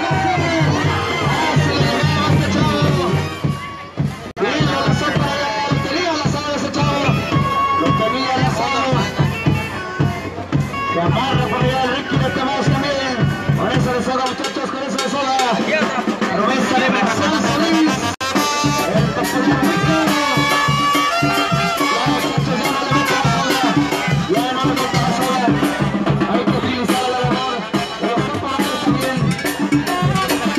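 At 4.31 s and again at 18.14 s, the sound drops out for about 56 ms and then 62 ms. These are gaps at a join of encoded pieces. Encoder delay and end padding were left in. Each silence has smeared edges, then the sound resumes.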